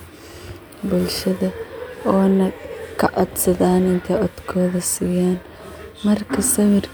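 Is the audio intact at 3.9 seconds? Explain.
Yes, the speech at 3.9 seconds is intact, with no dropout, click, distortion or other fault at that moment.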